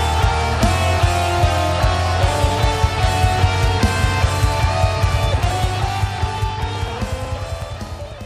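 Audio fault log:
5.51–8.12 s, periodic USB or driver dropouts: a steady train of small ticks, about twenty of them, spaced every 0.124 s, roughly eight per second, audible only where there is signal. Each tick is a tiny gap where around a millisecond of audio is skipped outright rather than filled with silence. Something blocking the USB bus or audio driver on a fixed schedule starves the stream at each interval, so the waveform jumps and clicks.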